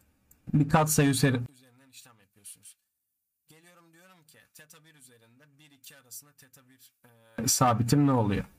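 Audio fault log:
1.46–7.38 s, one channel inverted: the sound drops by about 31 dB and turns faint. The likely cause is reversed polarity on one stereo channel. Summed to mono, the shared content cancels, leaving only the small difference between channels.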